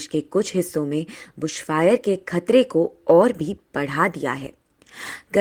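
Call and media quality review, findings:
No transport, capture or playback faults detected in the speech signal; levels, timing and continuity present as expected across the capture and playback paths.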